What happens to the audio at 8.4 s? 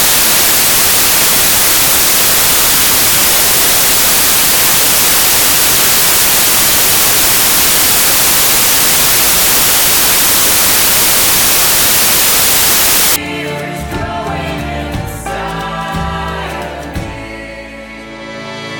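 At 8.4 s the audio is loud, harsh broadband noise from samples built from the wrong bytes, a fault running from the start to 13.16 s. The sample bytes are misassembled, so rapidly changing low bits dominate each value. Unlike a steady added hiss, this noise is built from the signal's own samples.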